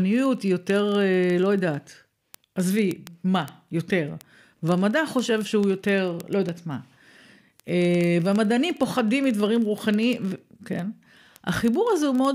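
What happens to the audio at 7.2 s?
At 7.2 s you're hearing word clock ticks, which run from 0.13 s to the end. An unlocked receiver clock slips a sample roughly every 30 ms, giving a steady, sharp ticking under the speech.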